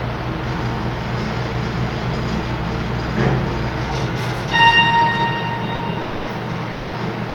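From 6.01 to 6.25 s, and again from 6.73 to 6.91 s, the sound drops out for 240 ms and then 180 ms, replaced by flat filler noise before returning. That's likely sound dropped by the voice detector, something like Opus DTX, mistaking real content for background.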